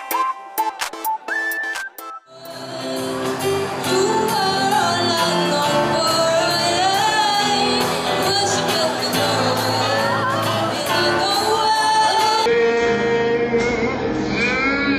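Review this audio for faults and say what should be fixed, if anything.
From 12.46 s to the end at 14.99 s, a section at the wrong speed plays at 0.529 times its original rate, so the sound drags and drops roughly ten semitones in pitch, likely from that segment being resampled or clocked at the wrong rate during editing or playback. Confirm sample-rate settings on every segment before joining or exporting.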